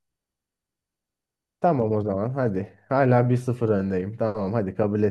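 No faults turn up anywhere in this speech recording; nothing in it calls for attention.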